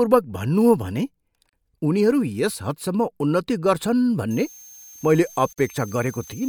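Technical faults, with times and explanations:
1.49–1.53 s and 5.53–5.58 s, gap at a join of encoded pieces: the speech drops out for 36 ms and then 49 ms, exactly 4.0 s apart. Each separately encoded piece keeps its start-up delay and padded final frame. The waveform shows a flat hole with slightly smeared edges, and the spectrogram shows a thin blank column.
4.31–6.49 s, switching supply whistle: a high whistle between 6.3 and 6.4 kHz enters and runs to the end, roughly 25 dB below the speech. A switching power supply is running in an audible burst mode or beating with another one. On a spectrogram it appears as a thin, slightly wavering horizontal line near 6.3 kHz.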